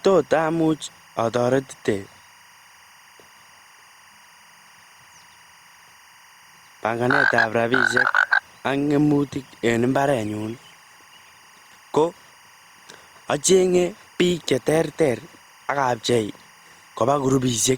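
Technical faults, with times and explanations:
Throughout, timecode bleed. A faint chirping warble sits well below the speech. Leaked 24 frames-per-second timecode flips between tones near 1 and 2 kHz.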